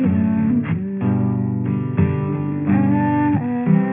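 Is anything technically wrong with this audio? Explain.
Yes. Aliasing runs throughout. Content above 3 kHz folds back to false pitches, which fits a downsampling to 6 kHz without filtering. It sounds gritty and metallic, roughly 25 dB down.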